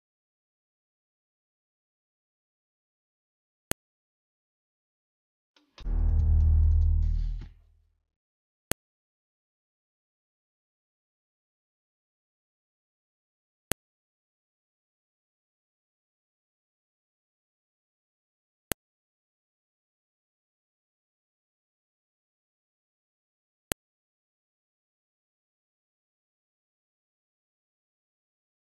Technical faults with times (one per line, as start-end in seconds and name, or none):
3.71 file header played as audio
8.72 file header played as audio
13.72 file header played as audio
18.72 file header played as audio
23.72 file header played as audio